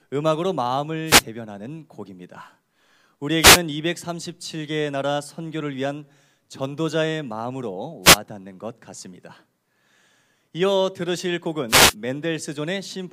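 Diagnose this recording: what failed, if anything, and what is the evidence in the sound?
Short bursts of static swish through the speech at 1.06–1.24 s, 3.39–3.61 s, 8.02–8.18 s and 11.68–11.95 s. These are wireless microphone noise hits in the analogue FM radio link: reflections cancel the carrier and receiver noise rises.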